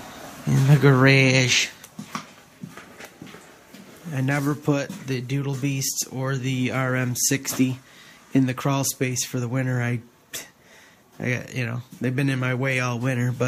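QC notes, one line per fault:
No faults found.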